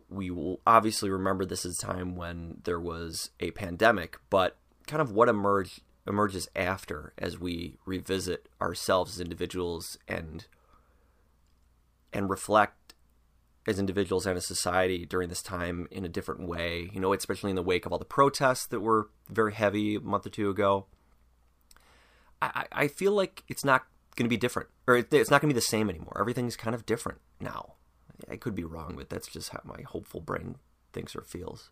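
No technical faults can be heard anywhere in the speech recording. Nothing in the signal stands out as needing a timestamp or a closer listen.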